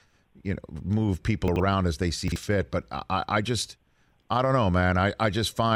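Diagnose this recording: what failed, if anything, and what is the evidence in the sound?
Chunks out of order at the buffer or network stage: a 40 ms block of the speech was delivered or written late and played after material that should have followed it. From 1.48 to 1.6 s the late chunk lands two blocks behind its place, and from 2.28 to 2.36 s one block behind. Nothing is missing, but each swap leaves hard joins, and the sound in those stretches comes out briefly jumbled.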